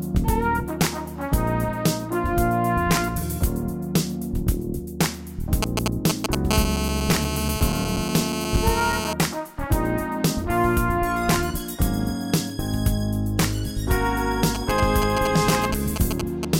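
From 5.63 to 6.35 s a galloping dit-dit-dit of short raspy buzzes cuts in, about as loud as the sound itself. These are GSM signalling bursts: a nearby 2G phone is exchanging brief groups of radio bursts with the network, and the audio circuitry rectifies each group into a clipped fragment of a 217 Hz buzz. The same pattern returns from 14.55 to 16.45 s, somewhat quieter than the sound this time, with the phone still only signalling.

In between, from 6.51 to 9.13 s, the bursts settle into a continuous, hard, raspy buzz about 6 dB below the sound, rich in harmonics and unrelated to anything in the audio. This is GSM phone buzz. Once the phone is in a call it transmits a burst 217 times a second without pause, and the rectified pulse train becomes a steady 217 Hz tone with a gritty edge.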